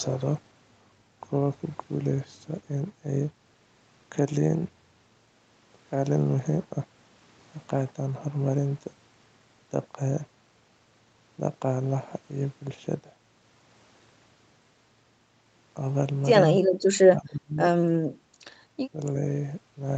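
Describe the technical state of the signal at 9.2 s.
At 9.2 s the speech is intact, with no dropout, distortion or other fault, only the ordinary call-path band limit with nothing above about 8 kHz.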